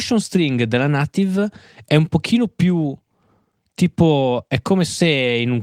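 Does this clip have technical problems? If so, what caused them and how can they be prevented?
No, the speech signal shows no technical problems, so there is nothing here that needs preventing.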